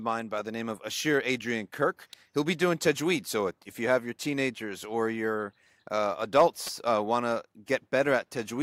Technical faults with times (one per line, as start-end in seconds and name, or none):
2.13 electrical switching spike
6.67 electrical switching spike